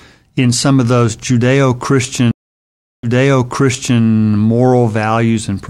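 At 2.31 s the connection drops and the player performs a stream reconnect, restarting its decoder mid-stream. The speech cuts to about 0.72 s of silence, then resumes roughly 0.98 s earlier than where it stopped, so a stretch is heard twice, ending at 4.01 s.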